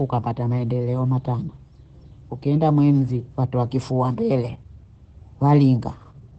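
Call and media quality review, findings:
Likely Opus compression at a low rate, fitting roughly 12 kbps in speech (SILK) mode, throughout: band capped near 8.7 kHz, voice muffled and hoarse, heavy codec damage.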